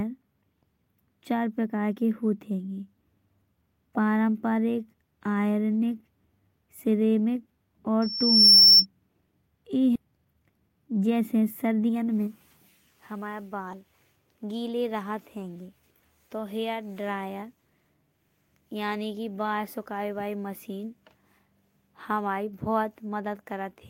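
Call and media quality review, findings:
Loudspeaker feedback squeal, 8.02 to 8.86 s: a 5.4 kHz tone swells over about half a second to roughly 15 dB above the speech. Mic is hearing its own speaker and loop gain tops unity at that frequency.

Skip ahead at 9.95 s: playback jumps forward with no gap, and about a second of speech is gone, joined almost seamlessly. Likely the jitter buffer overflowed and dumped a chunk of queued audio, cutting latency by roughly a second in one hit.

Jitter buffer speed-up, 10.04 to 12.34 s: speech runs about 11% fast at normal pitch and sounds rushed. Receiver is trimming pitch-period slices back to back to drain excess buffered delay, around a third of a second removed overall. Points to bursty packet arrival upstream.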